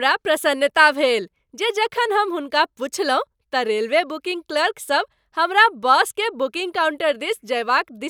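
Nothing is technically wrong with this speech clip.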